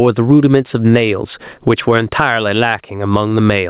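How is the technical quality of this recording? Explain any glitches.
The recording suffers from gain pumping throughout the speech. The level swings by around 20 dB: loud and soft parts end up closer in level, and the sound is squashed. The likely cause is input gain set far too high, with a fast limiter or compressor clamping down on each peak and then releasing. On a waveform the envelope looks flattened, with peaks squashed to a similar height and noise filling the gaps. On a spectrogram the noise floor brightens between phrases and darkens under speech. The audio also passed through a call path with nothing above 4 kHz, which fits G.711 mu-law at 64 kbps.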